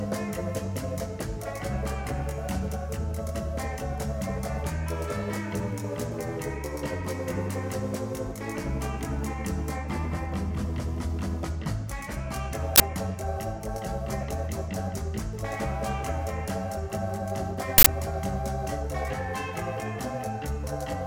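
Short, loud bursts of digital noise hit at 12.76 s (40 ms) and 17.78 s (80 ms): an uninitialised buffer, played before any audio was written, outputting leftover memory.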